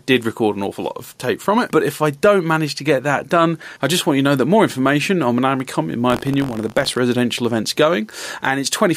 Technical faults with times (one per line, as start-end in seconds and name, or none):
0.00-8.97 gain pumping
6.08-6.99 buffer tearing